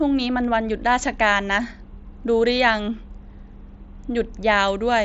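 Speech carried over a Bluetooth mSBC headset link shows no technical faults, its audio band reaching up to about 8 kHz as that wideband codec allows.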